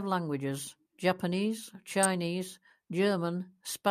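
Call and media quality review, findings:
Sharp snap at 2.03 s over the speech, peaking around -10 dBFS. Electrical switching spike; likely a nearby switch, motor or static discharge arcing briefly, with the audio line picking up the burst as a sharp snap.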